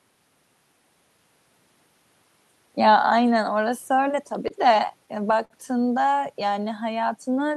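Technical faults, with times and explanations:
4.03 to 5.53 s, repeated stalls (stutter): packets kept arriving late, so the jitter buffer ran dry ten times and the receiver stretched the last sound to cover each gap, about 143 ms in all, longest 53 ms. Nothing's lost, but the speech drags and stutters.
6.54 to 6.93 s, jitter buffer slow-down: the buffer was low, so the receiver repeated single pitch periods to build a reserve, adding 38 ms. That stretch plays at about 92% speed with the pitch unchanged, so sounds come out slightly drawn out.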